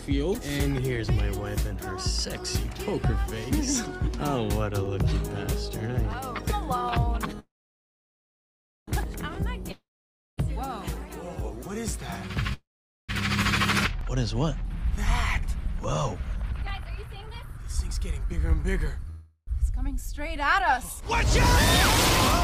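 Repeated buffer at 4.86, 6.12, 11.34–11.36 and 14.01 s: each time, new audio arrived late and the same tiny slice played again with a hard join, heard as a brief click or buzz. The slice length fits a 10 ms buffer, and at 11.34 s it plays three times. Call audio freeze at 7.39–8.90, 12.53–13.12 and 19.10–19.50 s: the last sound carries on as a fading buzz, then goes quiet for about 1.4 s, 0.45 s and 70 ms respectively before the audio resumes from where it stopped, likely because delayed packets emptied the jitter buffer, so a gap is inserted but nothing is lost. Long network dropout at 9.71–10.40 s: a similar fading fill gives way to roughly 0.55 s of silence, and when sound returns about 0.66 s of it is gone for good, likely because packets never arrived at all. Jitter buffer speed-up at 15.28–18.33, 18.80–19.07 and 19.62–21.24 s: the receiver trimmed many short pitch-period pieces to drain built-up delay, so the audio runs at 111%, 117% and 105% speed with pitch unchanged, and the first stretch loses around 0.4 s.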